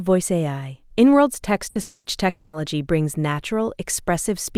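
A short burst of packet loss hits at 1.69 to 1.78 s: about 60 ms of audio never arrived, so the receiver stretches the last sound into a brief fading buzz or hiss, then jumps ahead with that stretch missing. Two longer gaps follow, at 1.81 to 2.08 s and 2.29 to 2.56 s, both likely long network dropouts. In each, roughly 240 ms is lost and papered over by a concealment tail that fades. The first ends in about 50 ms of silence before the sound resumes, while the second resumes straight from the fading fill.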